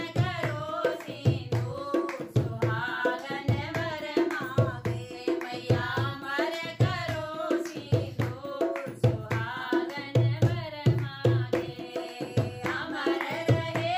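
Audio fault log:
No technical faults can be heard anywhere in this audio.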